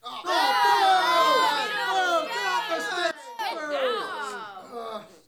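At 3.11 s the level falls abruptly by about 15 dB, and it stays down until 3.39 s, when it snaps back up. This is a sudden gain jump: the digital gain changes between one sample and the next, likely because a gain setting or bit shift was applied with no ramp. Unlike a fade, there is no gradual slope. Unlike a dropout, the sound never vanishes, and the background noise drops and returns together with it.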